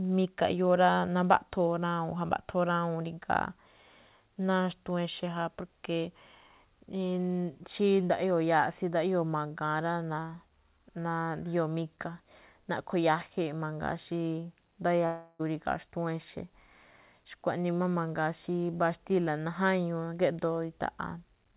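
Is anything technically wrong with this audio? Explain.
Yes. At 15.06 to 15.41 s the speech dissolves into a fading buzz, then briefly goes silent: likely a long network dropout, with roughly a third of a second concealed.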